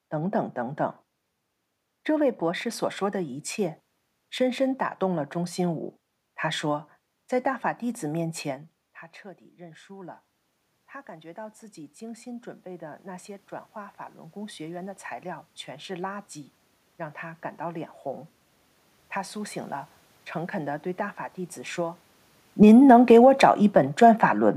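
Speech clip. After the talker moves back from the microphone at around 8.5 s, the level drops by about 17 dB. An automatic gain rising fault follows: the gain climbs about 11 dB from 9.55 to 23.82 s, lifting voice and room noise together. Near 22 s the talker moves again. From 22.47 to 24.28 s an automatic gain falling fault pulls the gain down about 4 dB, so voice and background sink together.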